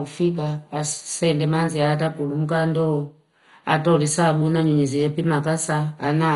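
Right from the start and through the whole clip the speech sounds dull and gurgly, with a grainy, watery distortion that never lets up. Nothing comes through above about 11.2 kHz, and the upper bands seem to flicker in and out. That's likely MP2 compression pushed hard, the way low-rate digital radio sounds: starved of bits, the coder shuts off whole upper sub-bands and coarsely quantises the rest. The heavy damage fits a rate somewhere around 56 kbps.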